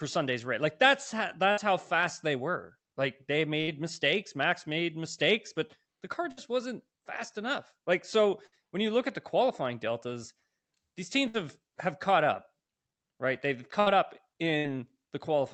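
Bursts of packet loss hit at 1.51, 3.61, 6.31 s (between "the car" and "wasn't fast enough"), 8.47 s (before "when you look at"), 11.28 s (before "have caught up"), 13.80 and 14.58 s. Each time, the receiver stretches the last sound for 50 to 65 ms. It fades as a held buzz or hiss. The speech then resumes with about 60 ms skipped.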